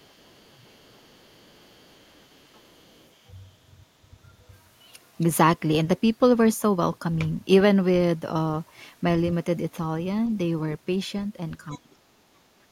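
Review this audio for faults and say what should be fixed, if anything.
Other side's voice leaking through, 0.00–3.09 s and briefly at 11.71–11.78 s: a faint second voice, very low then louder, likely uncancelled loudspeaker echo. A headset or stronger residual-echo suppression would prevent it.

Speech suppressed in double talk, 11.76–12.04 s: the talker dips by up to about 25 dB for roughly a third of a second while both sides overlap. Better double-talk detection in the echo canceller would keep the talker's voice from being turned down.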